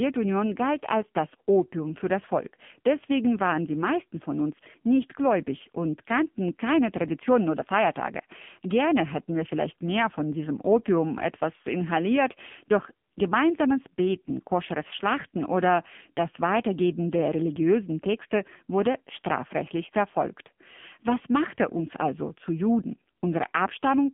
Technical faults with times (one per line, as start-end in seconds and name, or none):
0.00-24.13 AMR narrowband mobile codec